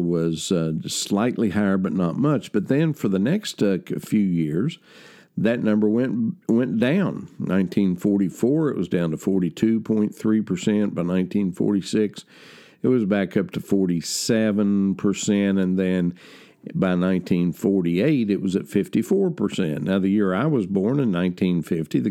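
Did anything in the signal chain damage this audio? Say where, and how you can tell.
No, nothing along the signal chain has left an audible mark on this speech recording. At no point in the clip can any stage of capture, conversion, transmission or playback be heard altering the sound.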